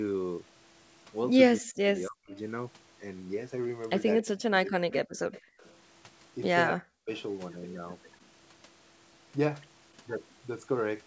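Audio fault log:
1.57–2.35 s, 4.21–5.08 s and 6.75–7.11 s, speech suppressed in double talk: the speech sinks by up to about 40 dB in pieces, for roughly half a second, then 0.7 s, then 0.3 s. This is likely the echo canceller hearing both ends at once and turning everything down. On a waveform the envelope collapses to a thin line mid-phrase. A spectrogram shows the harmonics fading or breaking into gaps, the upper bands going first.
2.34–2.39 s, 5.32–5.41 s and 5.60–5.73 s, echo leak: brief faint repeats of the speech arrive about 0.28 s after the original, sitting about 35 dB below the speech, or about 25 dB below in the 5.32 s scrap. This is likely far-end loudspeaker sound that the canceller did not fully remove and that was sent back. A spectrogram shows a weak, shifted ghost of earlier harmonic patterns. The waveform barely shows these short, chopped scraps.
5.41–5.60 s, background gated by the echo canceller: between the two echo scraps, the room tone drops by about 35 dB for about 0.2 s and then comes back. 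The canceller clamped the microphone while the loudspeaker played, which makes the background briefly go dead. On a spectrogram the broadband noise floor shows a dark vertical notch. On the waveform the low-level noise flattens to near silence before recovering.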